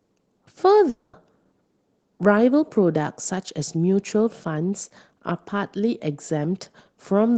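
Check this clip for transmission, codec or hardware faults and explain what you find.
One transmission fault stands out in this speech, heard through a call codec band-limited near 8 kHz. From 0.89 to 1.15 s, the sound smears into a fading buzz for about 240 ms, dips briefly to silence, then resumes with that stretch lost. The likely cause is a long network dropout, with the receiver extending the last audio while nothing arrived.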